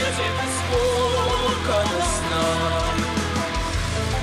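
Filter restarted on every block, heard throughout the clip. The filter discards its internal state at each block boundary and starts again from silence, leaving a small transient every time. These repeat as a buzz at about 93.8 Hz, which fits a 512-sample buffer, rising and falling with the sound's level.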